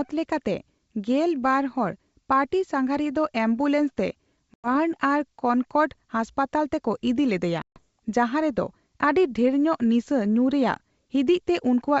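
Packet loss on an ADPCM call cut roughly 100 ms at 4.54 to 4.68 s, after "ᱦᱚᱲ ᱯᱟᱨᱴᱤᱼᱥᱟᱸᱜᱷᱟᱨᱤᱭᱟ ᱫᱚ ᱮᱢᱵᱩᱞᱮᱱᱥᱛᱮ", and 140 ms at 7.62 to 7.78 s, which fits a handful of packets each. The gaps were filled with silence, leaving the decoder's predictor and step size out of step with the sender's. The 64 kbit/s G.722 speech drops into abrupt holes and returns slightly distorted before settling.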